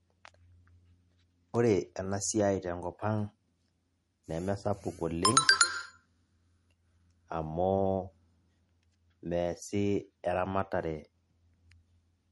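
From start to finish the speech has a hard treble ceiling at 11.6 kHz and a watery, swirling texture, with sibilants chirping metallically. This is likely MP3 compression at roughly 40 kbps. A spectrogram shows a flat cutoff and flickering gaps in the high bands.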